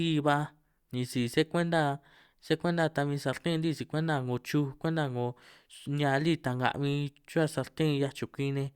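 Nothing in this speech recording stood out as a technical problem on listening.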